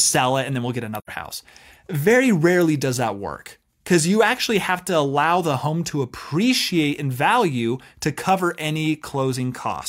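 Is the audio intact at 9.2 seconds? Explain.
No. At 9.20 s the speech has a single sharp click, a brief tick that shows up as a thin vertical line running across the whole spectrum. This is most likely dropped samples: something like a single sample went missing from the stream, a fraction of a millisecond, so the waveform jumps abruptly from one value to a later one. That loss is far too short to remove anything audible, but the sudden step is heard as the click.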